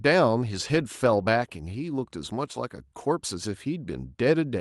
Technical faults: none

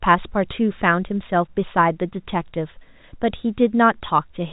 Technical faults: none

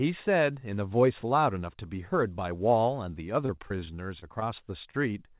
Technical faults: repeated packet loss (robotic sound); short stall from a late packet

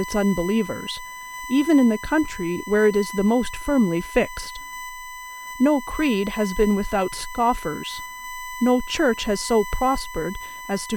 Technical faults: USB whine

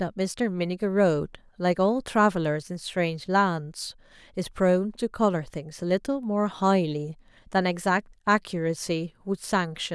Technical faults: none

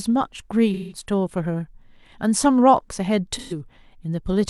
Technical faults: AAC frame loss with concealment

